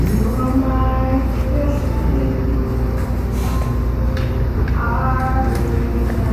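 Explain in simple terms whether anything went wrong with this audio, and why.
Nothing went wrong that I could hear: listening to these sounds, no glitch, gap, distortion or other problem stood out at any point.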